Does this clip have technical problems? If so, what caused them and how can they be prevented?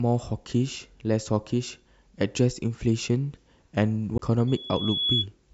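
Yes. A CD skip occurs at 4.18 s: a tick and a very brief mute, after which the speech resumes from a different point, as though a few moments were cut or repeated. A knock or a flaw on the disc threw the laser onto another turn of its spiral, so playback picked up one or more disc revolutions away from where it left off. Keeping the player on a stable, vibration-free surface and using clean, undamaged discs prevents this.

A loudspeaker feedback squeal runs from 4.47 to 5.26 s. A single tone near 3.4 kHz grows over roughly 0.7 s until it sits about 5 dB above the speech. A microphone was picking up the loudspeaker it feeds, and at that frequency the loop gain exceeded one, so the tone fed on itself and kept rising. Lowering the gain, moving the microphone away from or behind the loudspeakers, or notching the offending frequency prevents it.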